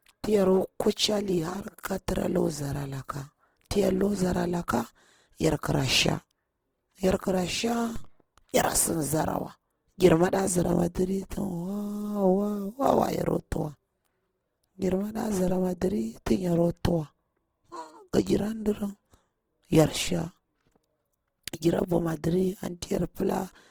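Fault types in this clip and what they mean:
Opus compression: Throughout the speech the tone is rough and grainy, plainly damaged, with band energy kept but fine detail replaced by folded or noise-like filler. This points to a low rate near 16 kbps in the CELT music mode, and the likely cause is Opus compression. On a spectrogram the upper bands look smeared and speckled rather than full of holes, and content stops cleanly at 20.2 kHz, so the bandwidth stays fullband.
DC step: At 7.96 s the zero line of the waveform jumps to an offset, holds there, and steps back at 15.48 s. Each jump is heard as a low thump or click while the speech carries on unchanged over it. On a waveform display the whole trace sits shifted off centre between those two times. On a spectrogram each step shows as a brief vertical line with its energy concentrated at the very lowest frequencies.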